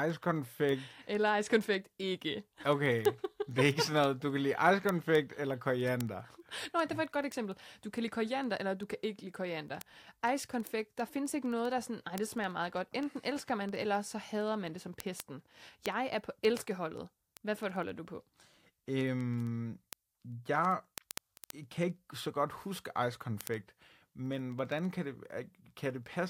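From about 0.1 s right through to the end, the speech carries word clock ticks, a steady patter of sharp clicks of uneven strength roughly every 70 ms, several hundred of them in all. That's a digital link being read by a receiver running on its own clock instead of locking to the sender's. The two clocks drift apart by something like a few hundred ppm, and each time they slip past each other a sample gets dropped or doubled, which is what you hear as each tick.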